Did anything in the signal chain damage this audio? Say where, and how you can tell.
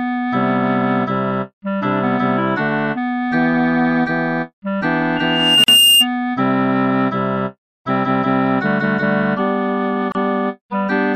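Yes. In the analogue stage, the microphone picked up the loudspeaker it feeds, causing loudspeaker feedback squeal from 5.16 to 6.07 s. A single 2.8 kHz tone swells over roughly half a second until it sits around 10 dB above the rest of the sound. At that frequency the loop gain passed one, so the tone fed itself. On a spectrogram it is one bright horizontal line at 2.8 kHz that thickens as it grows. In the waveform the envelope balloons.

Two gaps at a join of encoded pieces come from the codec stage, where separately encoded segments were spliced without trimming. The encoder's start-up delay and last-frame padding were left in, so the sound drops out and then resumes where it stopped. The first is a 44 ms gap at 5.64 s, inside the squeal. The second is 29 ms at 10.12 s. In the waveform each is a drop with smeared edges. On a spectrogram it is a thin vertical blank band across all frequencies.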